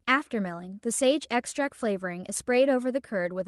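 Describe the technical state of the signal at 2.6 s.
At 2.6 s the signal is intact, with no audible fault at that point.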